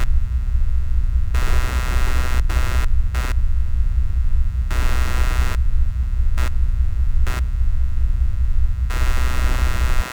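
Computer activity noise runs throughout: processor, graphics or mouse load shifts the audio circuit's shared ground, adding pulsing at around 150 Hz, roughly 20 dB below the sound. On a spectrogram it shows as comb-like harmonics that swell and fade independently of the sound.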